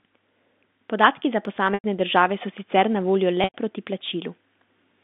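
From 1.21 to 2.56 s, automatic gain rising lifts the level by about 3 dB. The gain control judged the input too quiet. Speech and background swell together until just before "sicer na voljo".

At 1.74 to 1.84 s, packet loss with pitch repetition cuts a 100 ms gap, which fits five 20 ms packets. The receiver repeats the last pitch period, then fades it to silence. Speech returns with a short cross-fade. The same happens at 3.44 to 3.54 s, right after "sicer na voljo". Throughout, the band stays telephone-narrow from G.711 coding.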